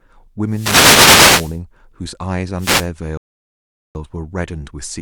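The microphone's radio link fades as reflections cancel, letting receiver noise surge through: a wireless microphone noise hit from 0.47 to 1.61 s, heard as a hissing swish, and again from 2.58 to 2.88 s as a shorter burst of static. At 3.17 s the player runs out of buffered audio, a rebuffering stall. The sound drops to silence for 0.78 s and then resumes at 3.95 s exactly where it stopped, adding time without losing any speech.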